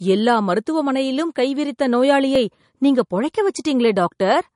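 From the start, the speech carries smeared, swirly MP3 artefacts. This points to low-bitrate audio saved at a high bitrate, likely a low-bitrate MP3 encoded again at a high rate. The second pass cannot restore what the first removed.

At 2.36 s the sound breaks. This is likely a dropped buffer from an overrun. About a millisecond or two of audio was overwritten before it was read. The two sides join directly, with no silence, so the sound jumps slightly.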